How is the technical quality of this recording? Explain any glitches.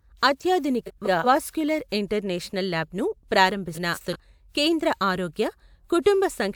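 The recording has two brief garbled spots where frames play out of order. From 0.86 to 1.26 s and again from 3.74 to 4.16 s, the speech flutters. Two adjacent blocks, each about 186 ms (which fits runs of four frames), were decoded in swapped order, so no time is lost.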